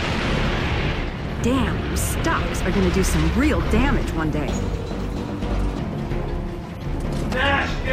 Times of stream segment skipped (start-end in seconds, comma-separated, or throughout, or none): none